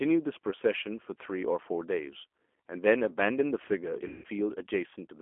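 From start to end the speech is carried by the G.729 codec, heard through a narrow line band of about 250 Hz to 3.4 kHz. It is plainly rough and synthetic, which fits 8 kbit/s coding. A simple filter would only dull the sound. Here it is rebuilt from a vocal tract filter and a few pulses.

From 4.08 to 4.26 s there is VoIP packet loss concealed by the speech codec. About 160 ms of audio is missing, which points to several consecutive packets. The decoder repeats its last pitch and filter at falling gain, so the gap becomes a fading buzzy tone or coloured noise rather than silence, and the speech stays weak briefly afterwards.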